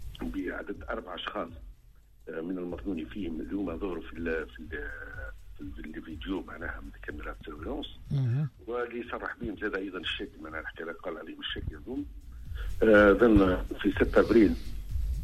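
No technical faults can be heard in this audio.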